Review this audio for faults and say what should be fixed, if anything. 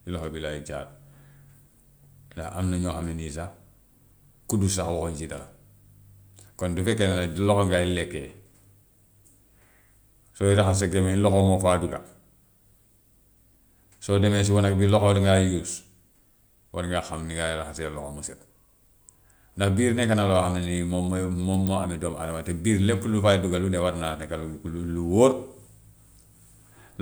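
No faults found here; nothing needs fixing.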